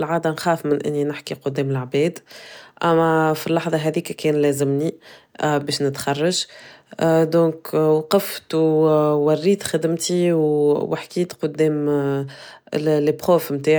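Nothing stood out on listening to this speech recording.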